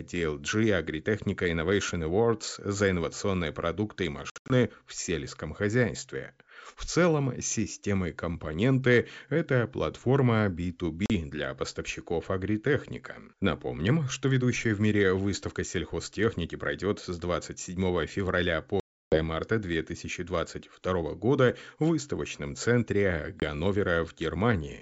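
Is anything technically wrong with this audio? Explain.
Yes. The speech, carried over G.722 wideband coding that sounds clean, suffers packet loss on an ADPCM call four times. Between 4.30 and 4.52 s, after "за инновационные продукты и", about 160 ms is lost in short gaps. At 11.06–11.10 s, before "для поставщиков", 40 ms drops out. The longest hole, 320 ms, is at 18.80–19.21 s. At 23.40–23.44 s, after "года в выставочном центре", 20 ms goes missing. Each lost stretch becomes hard-edged silence. Because the decoder's adaptive predictor and step size drift from the sender's, the speech comes back with brief slight distortion. This after-effect sets it apart from a plain dropout.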